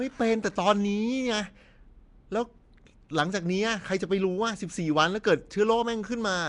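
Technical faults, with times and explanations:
Throughout, Nellymoser compression: the speech carries a rough, hissy halo and a smeared, underwater quality, with nothing above 10.6 kHz. It is likely Flash's Nellymoser Asao codec: weak bands are refilled with noise, which sets the hiss apart from MP3's watery swirl.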